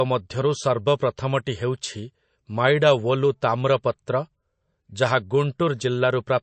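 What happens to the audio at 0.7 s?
At 0.7 s the speech carries MP3 compression artefacts, present throughout the clip rather than starting there, and likely caused by low-bitrate MP3 encoding, consistent with about 35 kbps. Short of bits, the encoder removed everything above 8.3 kHz and dropped weak frequency lines that flicker between frames, giving a plainly audible watery, swirly texture with dulled sibilants. A spectrogram shows a hard ceiling at 8.3 kHz and patchy, blocky holes beneath it.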